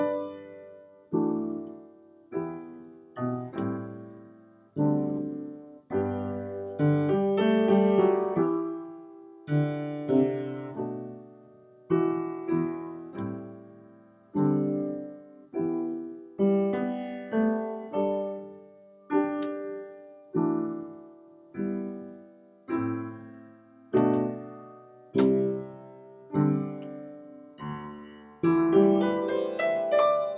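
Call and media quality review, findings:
No call or media quality faults found.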